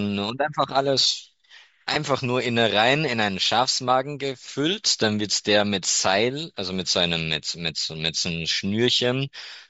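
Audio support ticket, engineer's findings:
Grainy, breathy edge on speech throughout; likely Bluetooth LC3 compression, around 32 kbps. Spectrogram: upper band thinned and noise-filled, not harmonic.

Lost LE Audio frames at 1.94–1.96 s and 5.86 s: brief noisy smears, about 20 ms and 10 ms, fitting 10 ms frames. Decoder reused last spectrum; waveform shows short hashy patches.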